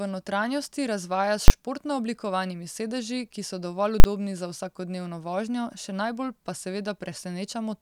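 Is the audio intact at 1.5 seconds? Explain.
No. From 1.48 to 1.50 s the audio breaks down with invalid numbers at full scale: a calculation returned infinite or invalid values that were clamped to the maximum sample level for a 20 ms block. That short block is heard as a single loud bang.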